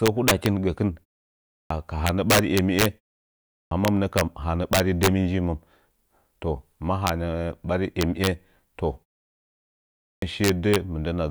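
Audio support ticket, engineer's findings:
Integer overflow: violent cracks on loud peaks at 0.06–0.46 s (ending just before "gə kɨn"), 2.07–2.86, 3.85–4.21, 4.73–5.07, 7.07–7.09 (just after "toh mə"), 8.01–8.27 and 10.44–10.76 s. Overdrive about 1 to 7 dB. Gain or mix stage wraps instead of saturating. On the waveform, peaks flip to the opposite side as tall vertical spikes. On the spectrogram, broadband vertical streaks.

Clipped start after a pause: speech onsets cut abruptly at 1.53, 3.52 and 10.05 s. About 170–190 ms is lost after pauses of 0.56, 0.6 and 1.08 s. The output device sleeps in silence and is slow to wake. On the waveform, the signal jumps from silence straight to mid-word amplitude. On the spectrogram, a hard vertical edge with no onset energy. Keeping the device awake through silence prevents it.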